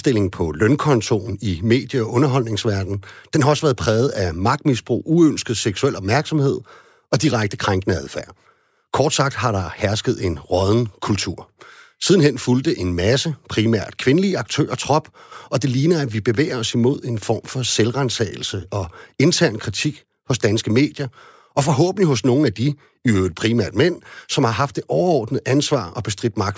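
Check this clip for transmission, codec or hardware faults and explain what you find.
Nothing in the speech stood out on listening as a transmission, codec or hardware problem.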